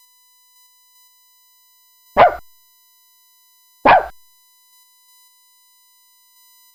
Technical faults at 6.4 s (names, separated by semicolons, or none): USB whine